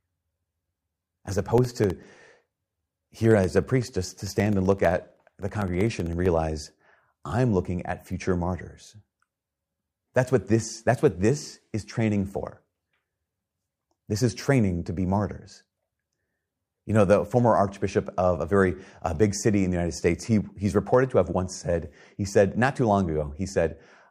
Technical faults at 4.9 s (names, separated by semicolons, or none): periodic USB or driver dropouts